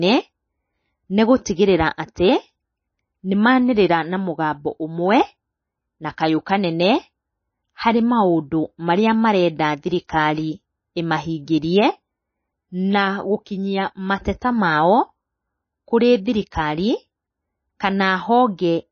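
MP3 compression, throughout: speech has nothing above 6.5 kHz and watery, swirling artefacts, likely from a very low bitrate starving the encoder and zeroing weak frequency lines.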